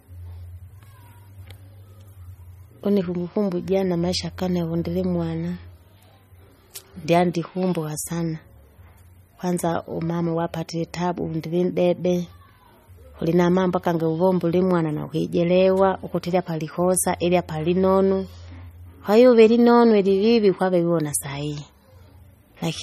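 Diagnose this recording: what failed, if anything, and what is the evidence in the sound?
Codec stage. Across the speech, nothing sounds above 14.5 kHz, and the damage is plainly audible. Likely MP3 compression, fitting about 32 kbps, dropping weak frequency lines.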